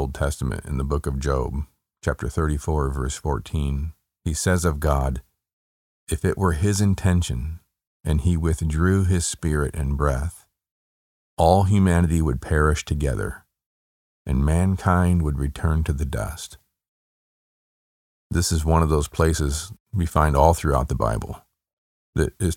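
No technical faults are audible anywhere in this speech recording.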